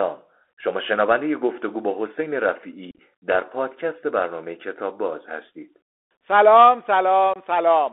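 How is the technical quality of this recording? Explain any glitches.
Narrowband, hissy and distorted phone-headset speech throughout, with two brief dropouts.

From start to finish the speech is boxed into a thin band of roughly 300 Hz to 3.6 kHz, s sounds come out scratchy, loud high-frequency moments distort, and a grainy hiss runs underneath. This is the Bluetooth CVSD headset codec, consistent with a 64 kbit/s link. It encodes each sample as a single up-or-down bit with an adaptive step size, so it cannot follow fast, loud high-frequency movement.

From 2.91 to 2.99 s the speech breaks up into chopped holes, about 52.5 ms of sound missing across a 75 ms stretch, the longest single gap 37.5 ms. At 7.34 to 7.36 s a shorter 22.5 ms hole cuts in abruptly. Both are unconcealed Bluetooth headset packet loss. Short voice packets between headset and phone went missing, the first burst around seven of them and the second around three, and nothing filled the holes, so the edges are abrupt and the speech resumes quieter for a moment.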